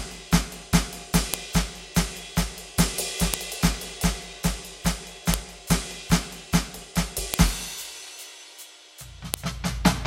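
Sharp, loud clicks cut through the music at 1.34, 3.34, 5.34, 7.34 and 9.34 s. This is a file header played as audio: 2-second WAV pieces were joined without their headers being removed.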